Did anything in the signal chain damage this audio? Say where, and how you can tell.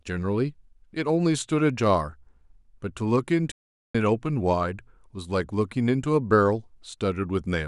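Yes, at the playback end. The speech cuts to silence at 3.51 s and comes back at 3.95 s, a gap of about 430 ms that lands mid-flow rather than at a natural pause. That's a playback stall: the output simply stops being fed for a moment. The likely cause is the player running dry on data, or its audio thread getting blocked, so nothing reaches the output until it catches up.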